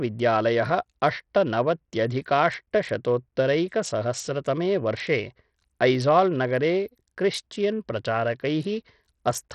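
A starved Bluetooth SBC link is the likely cause, running at a setting that fits a bitrate around 64 kbps. With so few bits shared across its handful of wide sub-bands, the upper bands get little or nothing and the rest are quantised coarsely. Throughout the speech the treble is heavily damaged, dropping out and flickering, while a gritty, grainy noise and metallic aliasing sit on top of every syllable.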